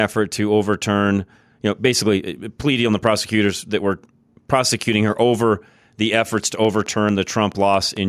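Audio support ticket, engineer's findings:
Train of clicks, 6.44–7.98 s, starting after "prosecuting her over the". Regular ticking at 4.57 per second, about seven same-shaped pulses peaking about 5 dB above speech. Likely nearby-equipment interference or a faulty connection or power supply injecting repeated impulses.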